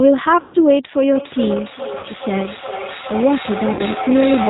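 The whole clip passes through the G.729 codec at 8 kbit/s. It rebuilds the speech from a vocal tract filter, a pitch predictor and a few pulses per frame, so nothing above 4 kHz survives. The result is band-limited, slightly rough and synthetic, with the codec damage plainly audible from start to finish.

At 0.40 s, packets drop out for 140 ms, which fits a run of about seven 20 ms packets. The G.729 decoder covers the gap with VoIP packet loss concealment, stretching its last pitch and filter state while lowering the gain. Until 0.56 s the speech smears into a fading buzzy tone or coloured noise. It stays weak and distorted briefly as the decoder's memory recovers.

From 1.15 s to the end, a second device on the same call plays this stream into the room. The microphone picks it up and sends it back, producing feedback echo between two devices that neither echo canceller can remove. Each stretch of speech returns roughly every 0.4 s, thinner and more ringing each time. 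At its loudest, the echo sits about 8 dB below the direct speech.

Inside that echo, two more losses are concealed the same way. The first, from 1.99 to 2.05 s, covers 40 ms. The second, from 3.73 to 3.82 s, covers 60 ms. Each is a short smear where the decoder extrapolates and fades, with a brief weak patch afterwards.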